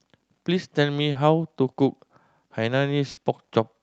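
At 1.11 to 1.17 s, a short concealed packet loss occurs. About 40 ms arrived too late, so the receiver extended the preceding sound. It is heard as a brief smear. At 3.11 to 3.19 s, a burst of packet loss removes about 60 ms. The last sound is stretched and fades, then the audio resumes further on, with the gap missing. Throughout, the audio is cut off above 8 kHz, which points to the call codec.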